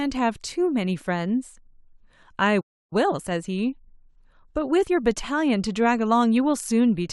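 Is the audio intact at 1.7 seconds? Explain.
Yes, the audio is intact at 1.7 seconds, with no fault audible at that moment.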